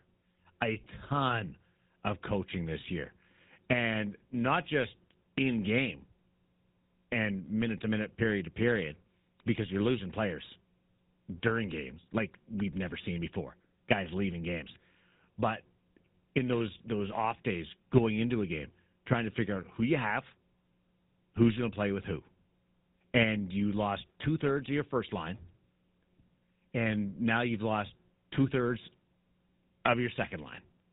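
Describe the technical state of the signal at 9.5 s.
At 9.5 s the voice has a buzzy, gravelly roughness and a dull, closed-in top end, with nothing above 4 kHz. This is GSM full-rate codec damage, plainly audible and present for the whole clip rather than at this moment alone, and it fits the 13 kbps GSM full-rate codec. The codec rebuilds the voice from a vocal-tract model excited by evenly spaced pulses that keep only every third sample, which produces the grainy buzz.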